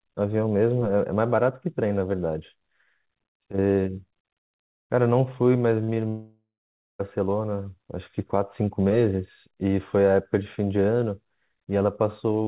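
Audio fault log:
5.84 s and 5.94 s, short concealed packet loss: brief smears where 40 ms, then 20 ms, went missing and the receiver stretched the preceding sound to cover it.
6.08 to 7.01 s, long network dropout: a fading buzz, then about half a second of silence, most likely nearly a second of audio never arriving, so that stretch is lost.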